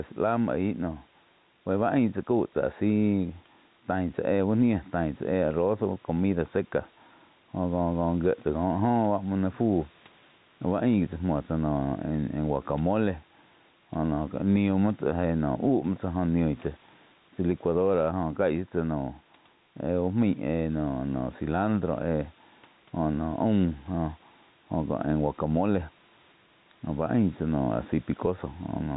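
Gain pumping runs throughout this speech: the gain swings around 5 dB, likely excessive input gain with a fast limiter pulling it down on loud sounds.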